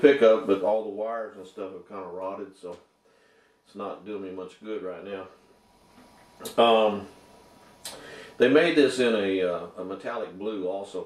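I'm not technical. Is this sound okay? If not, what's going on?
No. From 0.56 to 0.90 s there is zipper noise. The volume drops in many small jumps instead of gliding, making a fast ticking buzz.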